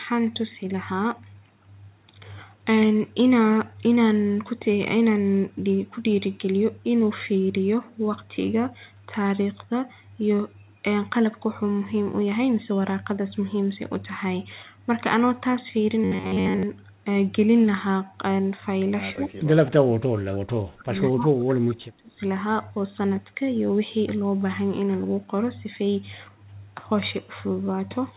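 From 16.04 to 16.63 s, the speech turns into a rigid, metallic buzz at about 94 Hz. This is robotic sound from repeated short buffers. Audio likely arrived too late, so a slice of roughly 11 ms was replayed over and over. Most of this stretch is repeats.

Speech is suppressed in double talk at 19.13 to 19.49 s and again at 19.67 to 22.25 s. The first dip is shallower, about 20 dB. The second is deeper, reaching about 35 dB over roughly two seconds. The echo canceller likely mistook overlapping talk for echo and pulled the level down. The voice fades and breaks up in patches.

Inside that second dip, from 20.16 to 20.20 s, there is an echo leak. A faint copy of the voice returns 208 ms late, about 25 dB below the speech. A loudspeaker's echo likely slipped past cancellation. It sounds like a brief ghost.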